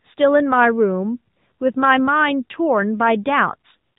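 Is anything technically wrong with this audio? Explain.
Yes. The whole clip carries AMR narrowband mobile codec damage, and it is plainly audible. AMR-NB samples at 8 kHz and rebuilds the speech from a vocal-tract model driven by a few pulses per 5 ms subframe. Nothing above about 3.8 kHz survives, so sibilants and airiness are gone. The speech sounds buzzy and synthetic. That degree of coarseness fits one of the middle modes, around 8 kbps.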